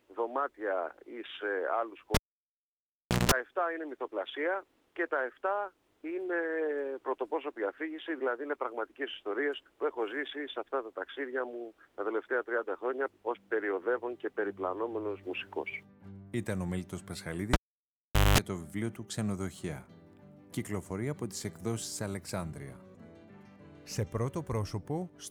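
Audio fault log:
2.14–3.31 s and 17.53–18.38 s, cable pulled and plugged in: a live lead yanked and reseated twice. Each time there's a pop, near silence for 1.12 s then 0.80 s, a buzz of about 180 ms and 210 ms while only the tip touches (60 Hz hum the first time, 50 Hz the second), then another pop as the sound returns.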